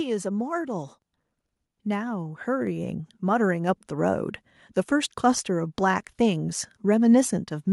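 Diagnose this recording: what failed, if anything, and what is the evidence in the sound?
At 1.02 s the whole recording, speech and background noise alike, steps up in loudness by about 4 dB, and at 2.67 s it steps up again by about 3 dB. Both jumps are instant, not gradual fades. This is a microphone volume stepped up fault, at the call-processing stage: the call software judged the input too quiet and raised the device's input volume in discrete increments. The gain applied upstream of everything else, so the noise floor rose with the speech.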